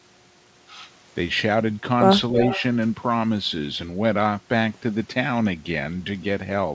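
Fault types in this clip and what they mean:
Echo leak: a faint delayed copy of the speech, about 10 dB down and lagging 321 ms, from 2.42 to 2.63 s, likely from loudspeaker pickup an echo canceller missed.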